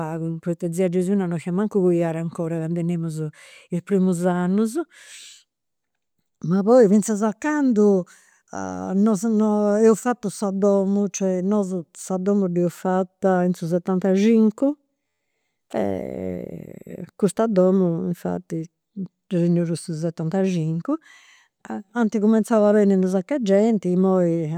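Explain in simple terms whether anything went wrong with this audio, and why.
At 15.08 to 15.20 s the sound briefly turns into a flat buzz: a system hang loop. The computer stalled while the sound hardware replayed one tiny 11.6 ms slice ten times, about 86 times a second. Unlike a dropout, nothing goes silent; one identical slice repeats.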